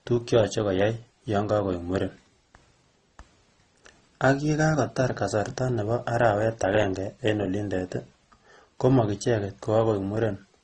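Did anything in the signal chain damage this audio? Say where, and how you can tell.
Yes, at the codec stage: the speech stops dead above 9.3 kHz throughout, with two mismatched kinds of smearing stacked. That's likely transcoding between lossy codecs, low-bitrate MP3-style into Opus.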